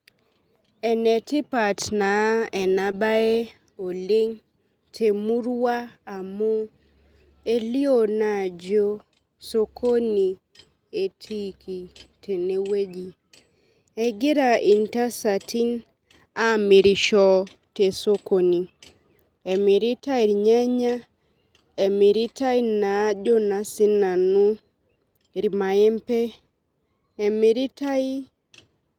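At 2.91 to 2.95 s there is a short concealed packet loss. About 20 ms of audio never arrived, and the decoder extrapolated roughly 15 ms from the preceding sound before blending back. It is heard as a brief smear or wobble. A spectrogram shows harmonics briefly smoothed or frozen, with a slight waveform discontinuity.

At 17.03 to 17.05 s a lost packet was rebuilt from error correction. About 20 ms, which fits a single lost packet, was replaced by its low-bitrate copy, so nothing drops out, but that moment sounds rougher and noisier. On a spectrogram that moment shows a briefly grainier texture.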